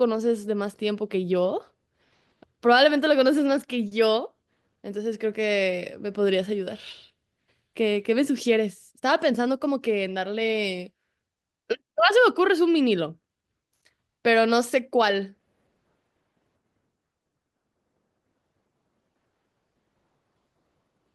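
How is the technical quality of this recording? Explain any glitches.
Two network timing glitches affect the recording, both from the receiver's jitter buffer.

At 3.87 to 3.93 s there is a short stall from a late packet. A packet missed its playout time, so the buffer ran empty and the receiver stretched the last sound by 40 ms until the packet arrived. Nothing is lost, but the sound hangs briefly with a slight buzz or dip, and everything after runs 40 ms later.

From 9.01 to 9.68 s comes a jitter buffer speed-up. The buffer had built up extra delay, so the receiver trimmed small pitch-period pieces, around 40 ms in total. The speech plays at about 106% speed at unchanged pitch and sounds slightly hurried.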